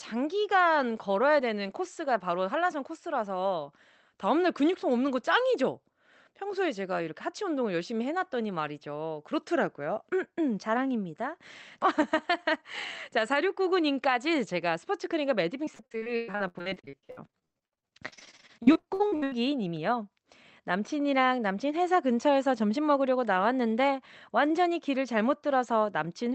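From 15.65 to 19.34 s the speech breaks up with repeated packet loss, giving a choppy, robotic sound. Dozens of short holes, the longest about 118 ms, are patched by stretching the last sound, covering roughly 44% of the stretch. A spectrogram shows smeared, frozen harmonics and abrupt breaks under an 8 kHz ceiling, and the waveform looks chopped.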